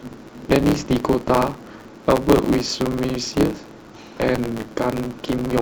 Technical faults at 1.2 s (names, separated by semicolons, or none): block size mismatch (truncated)